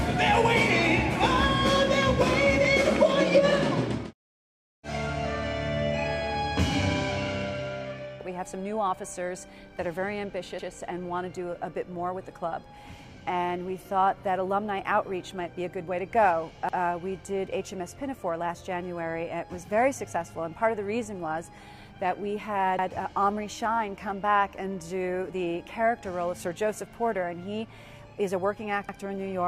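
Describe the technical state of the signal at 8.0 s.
At 8.0 s the signal is intact, with no dropouts, clicks, distortion or other faults to be heard at that point.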